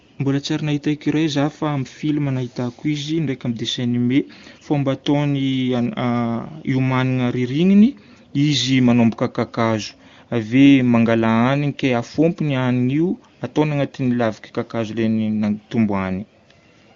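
Nothing stood out on listening to this speech recording.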